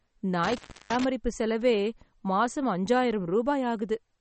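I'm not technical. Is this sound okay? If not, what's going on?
No. There are two problems. First, the whole recording sounds watery and swirly, and nothing above about 8.3 kHz comes through, so it sounds dull. The likely cause is heavy MP3 compression, which throws away sound detail to save space.

Second, there is an intermittent contact fault between about 0.44 and 1.04 s, just before "செலவே மாசம்". It sounds like a loose plug or cable. The speech drops out for about a third of a second, with crackles where it cuts out and comes back.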